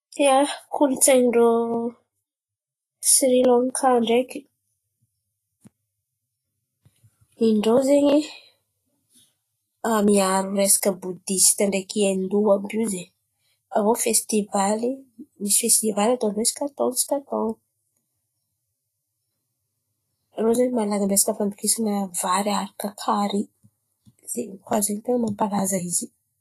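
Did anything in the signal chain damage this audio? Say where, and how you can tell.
Yes. At the codec stage, the whole speech clip carries plainly audible coding damage, most likely from Vorbis compression. Nothing is present above 14.2 kHz, and the upper band sounds hissy and granular rather than detailed, with roughened tone and soft consonant edges. That fits a low-rate encode near 30 kbps: the encoder trims bandwidth and quantises the treble residue so coarsely that fine detail becomes noise of similar energy.

The same codec also produces pre-echo in two places: from 0.71 to 0.74 s, a 27 ms spread, and from 13.71 to 13.75 s, a 40 ms spread. In each, a short hiss arrives just ahead of a sharp onset, and the attack itself sounds smeared. The transform spreads its quantisation noise across the whole block, so noise sized for the loud onset leaks into the quiet stretch that precedes it within that block.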